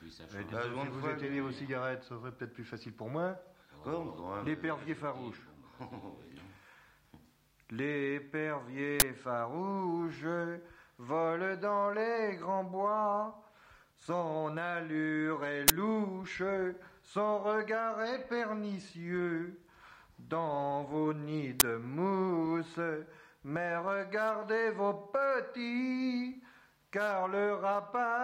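At 9.00–9.02 s, 15.68–15.70 s and 21.60–21.62 s, an uninitialised buffer plays leftover memory as samples, giving a loud 20 ms burst of digital noise. Unlike a dropout's silence or a single-sample click, each burst fills one whole block with noise.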